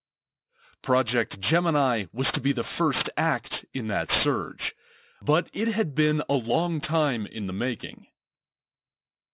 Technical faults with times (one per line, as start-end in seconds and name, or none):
0.00-9.33 aliasing